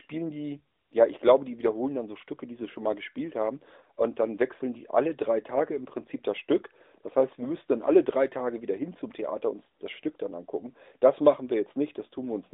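Nothing stood out on listening to this speech as a technical fault.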